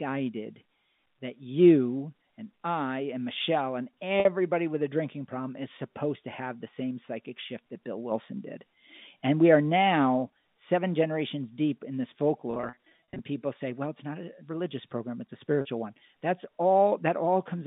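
A brief buzzy hold at 4.20–4.25 s before "with a drinking problem", a choppier stretch at 12.51–13.19 s between "generations deep in this" and "people say well it's", and another hold at 15.61–15.65 s before "one that's" are packet loss with pitch repetition. The receiver fills each gap by repeating the last pitch period over the narrow G.711 telephone band.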